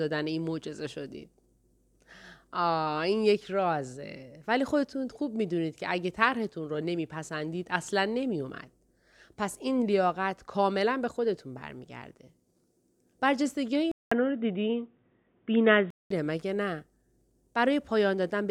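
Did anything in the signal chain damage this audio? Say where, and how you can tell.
Yes. The damage is at the input stage, likely an input switched to a poorer device. At 13.9 s the speech drops out for about 200 ms. Then it turns dull and boxy, with nothing above 3.8 kHz. The level shifts by about 5 dB, and a faint new noise floor appears, roughly 50 dB down. At 16.1 s the full band returns. The narrow band, the new level and the new noise all point to a different, lower-quality microphone path.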